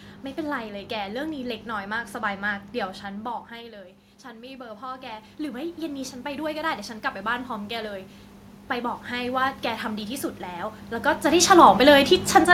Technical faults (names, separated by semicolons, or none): automatic gain rising